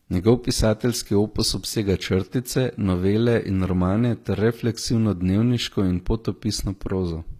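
Speech throughout, with plainly audible HE-AAC compression damage over the whole clip: the treble reaches high but is not the original, so s sounds come out gritty and lispy. The likely cause is spectral band replication rebuilding the upper spectrum from copied lower bands, consistent with a bitrate near 24 kbps.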